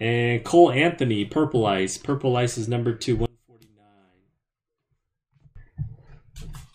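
From 3.26 s to 5.55 s the sound collapses to a faint remnant, about 31 dB quieter than before. Centred material and low end almost disappear. What survives is only the difference between the two sides. The likely cause is one channel inverted: one stereo channel has its polarity flipped. When the channels are summed to mono, everything they share cancels out. Full level returns at 5.55 s.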